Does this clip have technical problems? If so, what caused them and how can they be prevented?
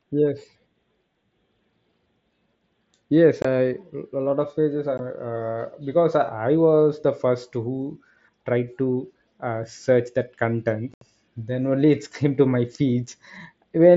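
Yes. The speech cuts abruptly to silence at 3.42–3.45 s, at 4.98 s, and for a longer hole at 10.94–11.02 s. This is unconcealed Bluetooth headset packet loss: voice packets on the mSBC link between headset and phone never arrived, and silence filled the gap. The longest gap points to about ten lost packets in a row. Keeping the headset close to the phone, away from Wi-Fi interference, and using a stack with packet loss concealment would prevent it.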